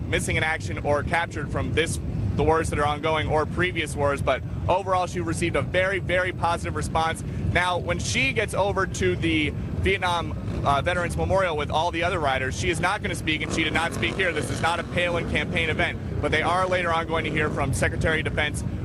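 No technical faults are audible anywhere in the clip.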